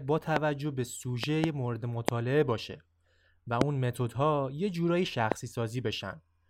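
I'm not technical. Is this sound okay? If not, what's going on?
No. The clip has loud pops. Something in the recording chain, likely a loose plug, a switch, static or a glitch in the audio hardware, sent sudden electrical jolts into the signal. Each jolt is heard as a sharp pop or thump over the speech, which carries on underneath. This happens at 0.36 to 0.39 s, 1.24 to 1.46 s (two pops close together), 2.09 to 2.11 s, 3.61 to 3.64 s and 5.32 to 5.34 s.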